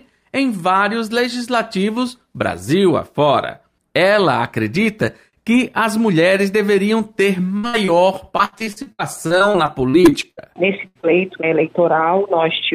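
At 7.57 to 7.65 s and again at 7.67 to 7.75 s, two bursts of packet loss occur back to back, each removing about 60 ms of audio. With nothing arriving in time, the receiver extended the last sound it had and let it fade across each hole. Both times the sound stalls into that held, decaying fill and then jumps ahead, leaving a short stretch of the original missing. The two stalls are only about 20 ms apart.

Between 7.85 and 7.89 s a short concealed packet loss follows, with about 20 ms lost. The decoder papered over it by continuing the preceding sound and blending back into the real signal, so it comes across as a brief smear or wobble rather than an obvious gap.

From 8.37 to 10.39 s, repeated packet loss gives a robotic sound. Seventeen separate holes open in quick succession, the longest about 72 ms, and roughly a quarter of this two-second stretch is patched fill rather than real audio. 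Each patch has barely ended when the next begins, so the sound turns choppy, with pieces dropped throughout.

At 10.87 to 10.97 s another burst of packet loss takes out about 80 ms, heard as a held, fading stall before the sound resumes further on. It is followed at 11.01 to 11.05 s by one more short concealed packet loss of about 20 ms, a quick smear just after the sound comes back.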